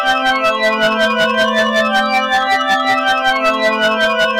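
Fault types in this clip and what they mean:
Hard clipping, throughout: the sound is driven about 9 dB past what the signal path can carry, so its peaks are sliced flat, roughly a tenth of all samples. Those squared-off tops add high harmonics, heard as a harsh fuzz on every loud moment.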